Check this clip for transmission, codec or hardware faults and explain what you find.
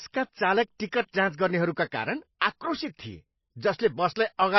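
Two codec problems stand out in this speech.

Throughout, there's heavy MP3 compression, most likely. Nothing comes through above about 5.8 kHz, so the top is shaved flat, and the starved bit budget leaves s sounds watery and swirly as weak frequency lines blink on and off, which fits a bitrate somewhere near 24 kbps.

At 2.39 to 2.41 s there's pre-echo: a brief hiss, about 20 ms long, creeps in just ahead of a sharp attack. The codec spread noise meant for the loud onset across its whole block, so it leaks into the quiet moment before and softens the hit.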